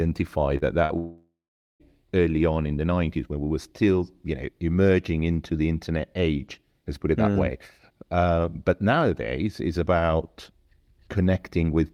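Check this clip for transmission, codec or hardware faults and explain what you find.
The clip has three transmission faults clustered in its first two seconds, all in the speech signal.

From 0.57 to 0.63 s there is a short concealed packet loss. About 40 ms of audio never arrived in time, and the decoder bridged the hole with roughly 37 ms of synthesised continuation of the preceding sound before crossfading back. It is heard as a brief smear or wobble rather than a gap.

Between 0.85 and 0.92 s comes a burst of packet loss. Again about 40 ms is missing, but here the receiver stretched its concealment over about 48 ms, extending the last sound while turning it down. That gives a held tail that sags in level before the speech picks up further on. The fade inside the fill is what separates it from the shorter concealed loss just before it.

From 0.98 to 1.88 s the sound holds as a buzz or hiss that fades out, then leaves about 440 ms of silence before speech resumes at "early on in the". 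Roughly 820 ms of audio is gone. This is most likely a long network dropout, where nothing arrived and the concealment gave up. The stretch of true silence after the fading fill distinguishes it from the two brief losses, which never go quiet.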